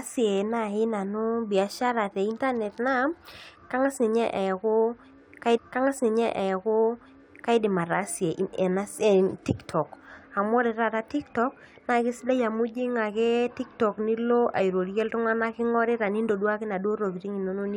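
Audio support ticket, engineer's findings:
Stream segment repeated: player fetched/queued same segment twice. 5.56–7.58 s replays, adding 2.02 s, small blip at jump back, then "ataasie ena".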